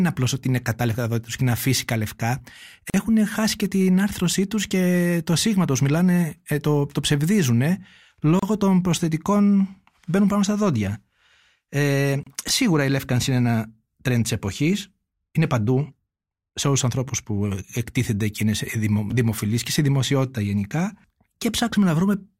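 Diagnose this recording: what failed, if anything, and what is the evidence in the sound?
The failure is at the encoding stage: a gap at a join of encoded pieces, at 2.90 to 2.94 s (about 40 ms), 8.39 to 8.43 s and 12.23 to 12.27 s (about 32 ms each). Separately encoded pieces were joined with their start delay and end padding untrimmed. Unlike a network dropout, the speech resumes exactly where it stopped, with nothing missing.

Chunks out of order, from the buffer or transport stage, occur at 12.48 to 12.50 s and 19.10 to 19.12 s. A 10 ms chunk plays one chunk late, giving a brief jumbled moment. Unlike a gap or dropout, there is no silence and nothing is lost, only misordered.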